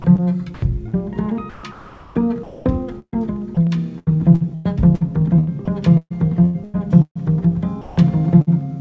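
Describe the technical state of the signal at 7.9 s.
Sound chopped by the voice detector, from 7.81 to 8.50 s. The likely cause is the sender's voice detection switching transmission off and on, so 214 ms of the sound is replaced by comfort noise, leaving choppy gaps.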